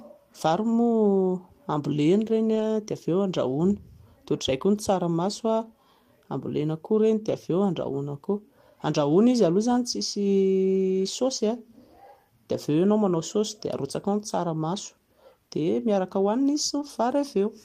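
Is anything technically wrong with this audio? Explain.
Yes. There are three brief cases of lost packets rebuilt from error correction, at 2.55 to 2.61 s, 7.27 to 7.33 s, and 16.81 to 16.87 s. Each rebuilt stretch lasts about 40 ms, which fits two lost packets. The packet that followed each loss carried a low-bitrate backup copy, and the decoder played that copy instead. So the speech never drops out. Those moments sound rougher and noisier than the audio around them.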